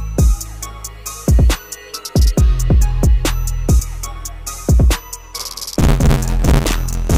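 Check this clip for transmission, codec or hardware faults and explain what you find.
Two faults are audible: a short skip in the compressed stream and, later, buffer tearing that continues to the end.

At 3.79 s, compressed frames are skipped. Roughly a tenth of a second vanishes, about three frames at 32 ms each. The audio jumps ahead by that much at the join.

From 5.38 s to the end, buffer tearing produces a steady 86.1 Hz robotic buzz, which fits a 512-sample buffer. Writer and reader cross, so a bit under half of each buffer replays audio about 50 ms old.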